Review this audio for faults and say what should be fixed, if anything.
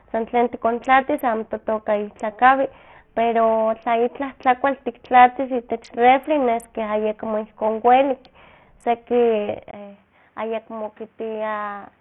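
Right through the speech there's heavy Bluetooth SBC compression, most likely. The top end flickers and drops out, and there's a gritty, grainy layer riding on everything, with a bit of aliasing fizz. That fits SBC squeezed down to a very low rate, around 48 kbps. At that rate the codec's eight sub-bands get starved, so the upper bands lose their bits and the rest are quantised coarsely. To prevent it, record over a wired connection, or force a higher-quality Bluetooth codec or bitpool.

Between 1.76 and 2.13 s, just after "san tlen tikontlatis amo", you get CD scratch ticks: three small clicks, the longest about 0.7 ms, coming at roughly the disc's rotation rate. A blemish on the disc wipes out more data than the error correction can rebuild, so each time that spot comes round the player patches over or mutes a few samples. To prevent it, clean or re-rip the disc with a secure ripper that re-reads damaged sectors.

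From 9.71 s to the end there's an input switched to a poorer device. There's a short gap of about 20 ms, then the sound goes dull and boxy, with nothing above 5.3 kHz, the level about 5 dB lower, and a new noise floor sitting about 35 dB under the signal. That narrow band, with its different tone and noise, most likely means the system jumped to another mic or a headset's call profile mid-take. To prevent it, lock the recording input so the OS can't auto-switch devices.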